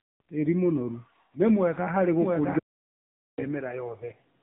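A speech clip carried through the AMR narrowband mobile codec for its whole length. On a spectrogram everything stops at a flat ceiling near 3.8 kHz, and the band below shows the coarse, smeared harmonics of a vocal-tract model excited by sparse pulses. The damage is plainly audible as a buzzy, synthetic voice, which fits a low mode around 7.95 kbps. From 2.22 s, just after "mũnoru ni mwega harĩ", to the end, there is a doubled audio track. A second full-band copy of the speech enters abruptly, trailing the original by roughly 0.7 s at about 5 dB lower, with no reverberant tail or room colour of its own. The waveform thickens suddenly at that point, and the spectrogram shows each syllable's pattern repeated as a fainter, time-shifted twin. This is likely a second capture through a slower path mixed back in.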